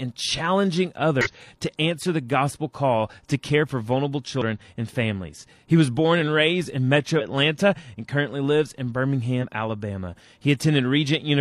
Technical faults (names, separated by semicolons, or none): damaged data in a compressed stream